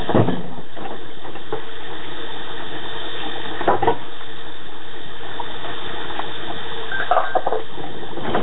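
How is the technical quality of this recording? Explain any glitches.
The technical quality is poor, with two faults running through the whole recording.

DC offset, present throughout: the waveform sits shifted away from zero by a constant amount. It can't be heard as a tone, but it wastes headroom and shows as steady energy at the very lowest end of the spectrum.

Nellymoser compression, likely the cause of the heavy damage heard throughout: nothing survives above 3.9 kHz, giving a dull, band-limited sound. The codec codes short blocks with very few bits, fitting roughly 16 kbps, so weak bands are filled with noise. That leaves a rough, hissy halo and a smeared, underwater quality over the sounds.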